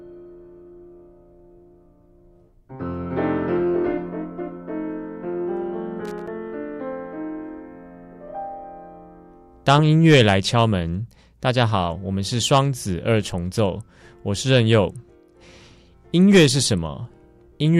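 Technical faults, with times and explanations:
6.05–6.28 s, loose connector crackle: a worn or dirty contact kept making and breaking for about a quarter second, chopping the signal into an irregular scratchy burst. The waveform shows ragged gaps and spiky clicks, and the spectrogram shows scattered broadband vertical streaks.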